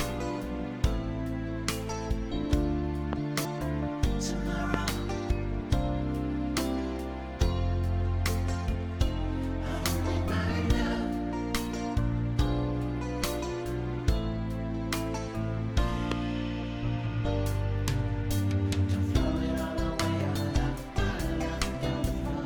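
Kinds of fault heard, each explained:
Loud pop: Three single sharp pops at 3.13, 4.74 and 16.12 s jump far above the surrounding level while the sound continues underneath, likely from a brief voltage pulse such as a switch, static or driver glitch. Each appears as a tall, narrow spike on the waveform and a thin vertical stripe across all frequencies on a spectrogram.
Damaged data in a compressed stream: At 3.44 and 20.34 s the decoder hits corrupted frames, loses sync and searches for the next frame header, producing a brief glitch. A spectrogram shows a short smeared or blocky patch breaking the normal texture, and the waveform shows a small discontinuity.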